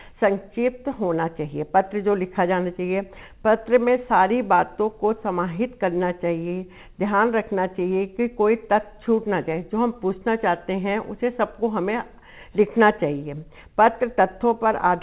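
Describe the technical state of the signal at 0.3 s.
At 0.3 s the audio is intact, carried through a call path whose telephone-band coding leaves nothing above about 4 kHz, which fits a 64 kbps G.711 mu-law link.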